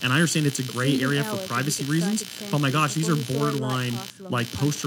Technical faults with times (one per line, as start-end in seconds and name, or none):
0.00-4.86 computer activity noise